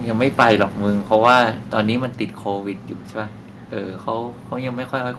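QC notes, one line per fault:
0.39–0.63 s and 1.14–1.42 s: microphone overload, likely from excessive input gain; peaks overshoot by about 8 dB and 5 dB, flat-topped waveform, broadband crackle streaking the spectrogram.
2.04 s: microphone volume stepped down, likely an automatic gain cut reacting to those clipped peaks; voice and background drop about 4 dB at once, a clear step in the waveform envelope.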